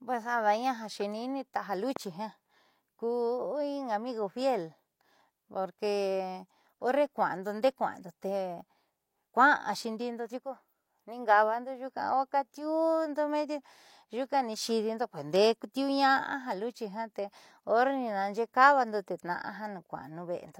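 Throughout, the speech has low-bitrate audio saved at a high bitrate. Nothing sounds above 16.2 kHz, and the smeared artefacts remain. This likely fits a low-bitrate HE-AAC source re-saved as high-bitrate MP3.

From 1.96 to 1.99 s, a single loud pop sits about 10 dB above the speech. It is likely a brief voltage pulse, perhaps from a plug or switch.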